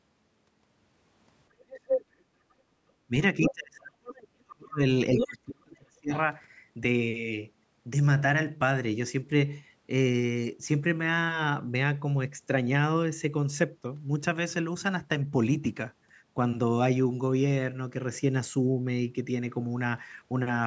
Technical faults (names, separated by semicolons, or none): other side's voice leaking through; speech suppressed in double talk